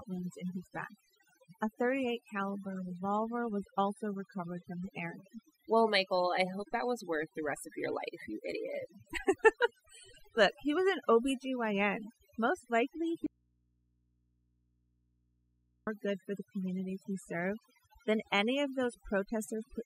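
Overdone noise removal runs through the whole speech clip. Bands near the noise floor are cut hard, leaving twinkling specks in near silence.

From 13.27 to 15.87 s there is an audio dropout to a faint residue. The speech cuts abruptly for 2.6 s. Only mains hum remains, far below the voice, likely from a live input after a broken feed.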